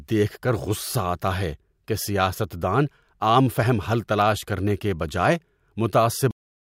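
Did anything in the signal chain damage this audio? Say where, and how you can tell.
Yes. The clip has a cut-off end, a fault at the storage or playback stage. At 6.31 s the speech stops abruptly, partway through a sound, and the final 0.31 s is digital silence. There is no decay and no room tail. The signal simply drops to zero. That points to the last buffers never being written to the file or never reaching the output. Recording or playback was closed before the queued audio was flushed.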